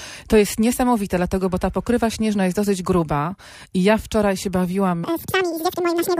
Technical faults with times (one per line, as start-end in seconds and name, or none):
5.04-6.20 section at the wrong speed